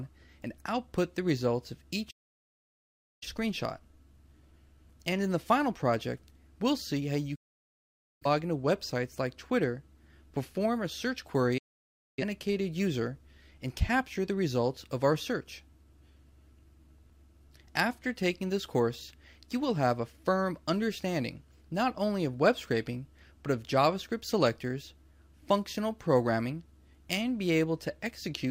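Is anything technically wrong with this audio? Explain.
Yes. Digital broadcast dropouts at 2.10–3.27 s, 7.35–8.27 s and 11.58–12.23 s: the receiver lost valid frames and muted, snapping to silence within about 8 ms. Holes of roughly 1.1, 0.85 and 0.6 s follow, their content lost.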